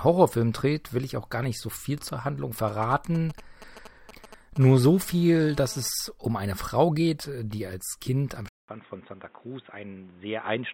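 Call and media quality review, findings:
Galloping ticks and short 217 Hz buzz fragments, 2.68–4.58 s, roughly 20 dB under the speech. GSM signalling bursts: a nearby 2G phone's radio pulses are rectified in the audio circuit.

Steady, raspy 217 Hz buzz rich in harmonics, 4.62–5.88 s, about 25 dB under the speech, stopping just before "um eine". GSM phone buzz from a 2G phone in a call, rectified by the audio path.

From 8.48 s to the end of the clip, a 200 ms gap, then dull, narrow speech with nothing above 3.8 kHz, level down roughly 10 dB, and noise roughly 30 dB below. Input likely switched to a poorer device.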